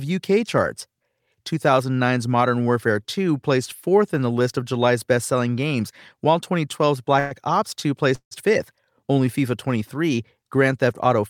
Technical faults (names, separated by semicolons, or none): call audio freeze